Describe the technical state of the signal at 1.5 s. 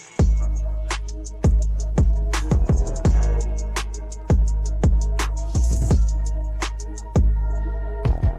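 The signal at 1.5 s is intact, with no audible fault at that moment.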